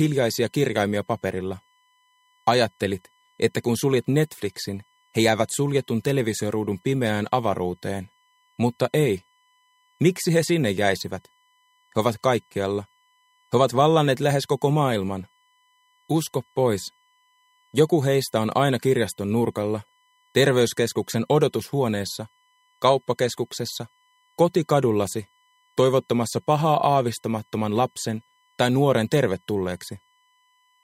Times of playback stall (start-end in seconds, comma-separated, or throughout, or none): none